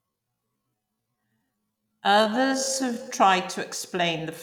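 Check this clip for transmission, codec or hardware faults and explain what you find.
One fault is present: a time-stretched section from 0.0 to 3.1 s, ending just before "tried to explain". Software likely lengthened this opening stretch to fill a longer slot. It played the speech at 0.51 times its original pace and held the pitch steady by repeating short slices of the signal. The speech drags at about half speed at an unchanged pitch, before the pace snaps abruptly back to normal.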